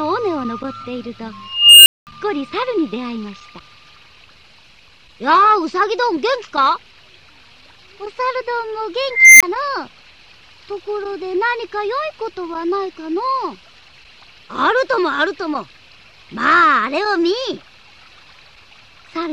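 An unstable filter runs away twice: from 1.48 s a tone near 3 kHz swells over 0.38 s into clipping, then drops to 0.21 s of silence; at 9.10 s a tone near 2 kHz builds for 0.30 s before a 23 ms dropout. Spectrograms show bright horizontal lines; waveforms show growing, clipped envelopes then flat gaps.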